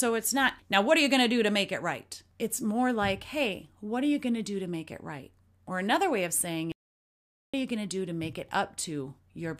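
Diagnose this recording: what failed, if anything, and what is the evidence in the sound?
There's an audio dropout to silence from 6.72 to 7.54 s, roughly 0.82 s where the speech cuts off mid-flow and the track falls to silence, with no room tone or noise floor underneath, before the voice snaps straight back. That clean silence points upstream of the codec, most likely at the input stage, where a dropped device link, loose connection or brief mute left the recorder writing silence. Whatever was said in that gap is simply gone.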